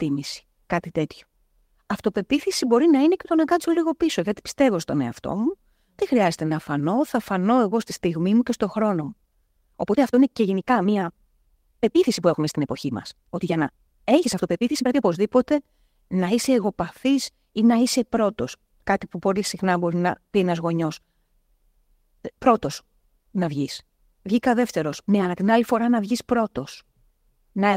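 A time-stretched section runs from 8.95 to 15.19 s, starting just after "στιγμή μου και στον". Here the speech suddenly rushes ahead at about 1.48 times its normal pace while the pitch stays unchanged, so syllables crowd together. The likely cause is software compressing that stretch to fit a shorter length, dropping short slices of the waveform to hold the pitch steady.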